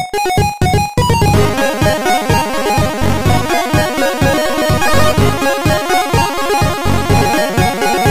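Nothing goes wrong anywhere in this audio, so there are no faults to describe.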